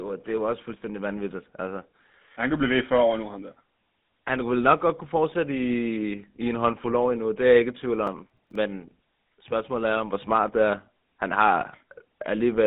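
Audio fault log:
throughout: GSM full-rate codec. The speech has the buzzy, gravelly roughness of the original GSM coder, plainly audible. The coder rebuilds the voice from a vocal-tract filter excited by a sparse, regularly spaced pulse train, so fine detail in the excitation is lost and replaced by a coarse, rasping texture. The band sits at roughly 150 Hz to 3.7 kHz with nothing above 3.8 kHz, which fits a 13 kbps full-rate stream on a narrowband line.
8.07–8.56 s: processor overload crackle. Just after "jeg ikke i tvivl", a half-second burst of gritty tearing rides over the speech, then stops. The processor repeatedly failed to deliver audio buffers on time, and each miss was filled by replaying a stale fragment whose hard edges click against the live signal. The spacing of the clicks points to buffers of about 5 ms, with several consecutive deadlines missed before the load cleared.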